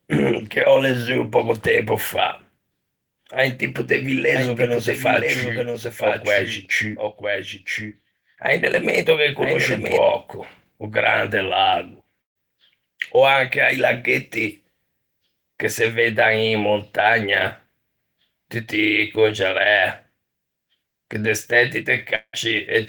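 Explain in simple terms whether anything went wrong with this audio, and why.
A few things went wrong with this audio.

From 4.36 to 9.98 s there's a doubled audio track: a second, somewhat quieter copy of the speech runs about a second behind the first, starting and stopping abruptly. Most likely a second, slower capture path or an edit left two copies out of step.

At 6.91 to 6.95 s there's a short concealed packet loss. About 20 ms of speech never arrived in time, so the receiver stretched the last bit of sound to cover it, which gives a tiny smear or wobble.

From 12.21 to 12.37 s a burst of packet loss knocked out about 140 ms. The receiver briefly carried the last sound on as a fading buzz or hiss, then went quiet, and the speech picks up further along with that piece gone.

From 22.15 to 22.35 s the sound stops again, likely a long network dropout. About 180 ms never played: a short fading fill, then silence, before audio returns with that part missing.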